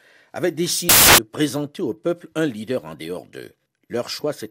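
Loud, harsh broadband noise bursts in from 0.89 to 1.18 s: samples built from the wrong bytes, misordered or misaligned, so the fast-changing low bits dominate each value.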